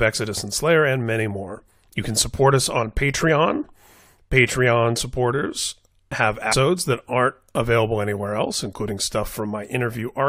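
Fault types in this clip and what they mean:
Stream segment skipped, at 6.51 s: right after "supporters have" the speech leaps abruptly ahead with a brief blip. The cause is likely a segment of the streamed audio that failed to load, so the player carried on from the next one.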